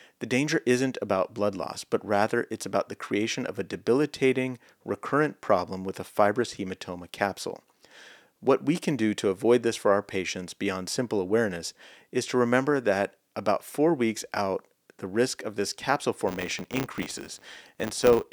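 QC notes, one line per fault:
16.28–18.32 s, filter restarted on every block: from just after "risk of this capsule", a 100 Hz buzz rides the speech, which fits 10 ms blocks each starting from a zeroed filter state. Unlike mains hum, it swells and fades with the speech level.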